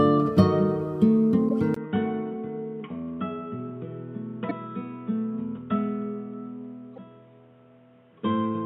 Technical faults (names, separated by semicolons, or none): corrupt frame decoded; input switched to a poorer device